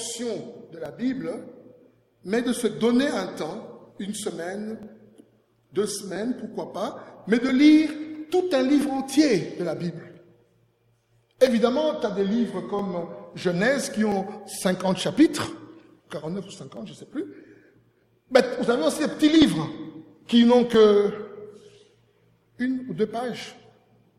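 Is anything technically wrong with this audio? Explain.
Yes. From 0.86 s to 23.40 s a click or pop recurs every 1.32 s, about twenty in all, evenly spaced throughout. That steady rhythm likely comes from clock drift buffer slips. Two devices running on independent clocks disagree by something near 700 parts per million, so the buffer between them slowly drifts out of balance. Each time it overflows or runs dry, around fifty samples are dropped or repeated, leaving a brief discontinuity that is heard as the click.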